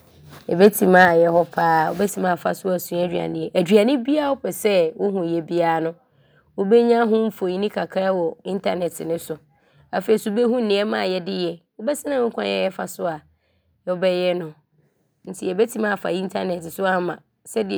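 A brief harsh, crackling edge cuts into the loudest syllables at 0.63 to 0.67 s and again at 0.96 to 1.05 s. The tops of the peaks sound squared off rather than rounded. This is likely microphone overload. The input volume was set high enough that these peaks pushed about 2 dB past the converter's ceiling, and a few percent of the samples in each burst were flattened at the limit. That flattening is what produces the gritty distortion.

Right at 1.05 s, just as the second distorted peak ends, the level of the speech and the background drops together by about 4 dB in a single step, with no fade. That points to the microphone volume being stepped down, likely by the call software reacting to the clipping it had just detected and cutting the device's input volume once to stop further overload.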